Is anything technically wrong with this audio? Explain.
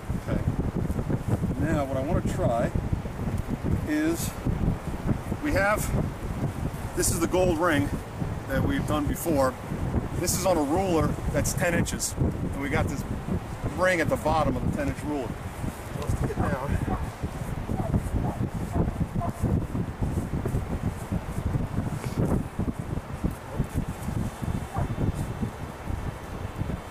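Yes, there are three spots where compressed frames get skipped, at 10.45, 15.94 and 20.61 s. Whole frames never reach playback, so the sound jumps ahead, roughly 50 ms at the first (about two frames' worth) and around 20 ms at the others.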